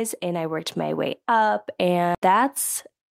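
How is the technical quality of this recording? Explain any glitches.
The recording has two glitches.

From 0.2 to 1.25 s, automatic gain rising lifts the level by about 4 dB. The gain control judged the input too quiet. Speech and background swell together.

At 2.15 s there is a CD skip. The laser jumped to another turn of the spiral. A tiny mute of a couple of milliseconds ticks, then the speech resumes elsewhere.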